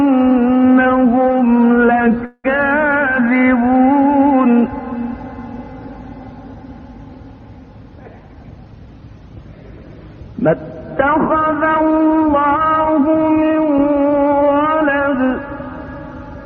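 From 2.25 to 2.46 s there is a call audio freeze. The last sound stretches into a fading buzz that ends in about 40 ms of silence, about 185 ms in all, likely because delayed packets emptied the jitter buffer. Unlike a dropout, nothing is lost: the audio resumes where it stopped, just 185 ms later.

From 7.83 to 9.02 s a jitter buffer speed-up plays the audio at about 114% of normal speed. Short pitch-period slices, about a fifth of a second in total, are cut to reduce the excess delay. Unlike a resampling speed change, the pitch stays the same, so it sounds hurried rather than raised.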